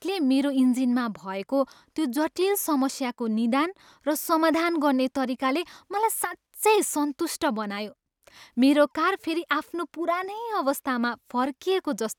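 Speech recording with no audible technical faults.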